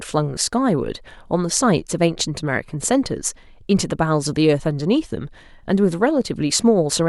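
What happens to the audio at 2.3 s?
Nothing goes wrong at 2.3 s; the speech carries on intact through that moment.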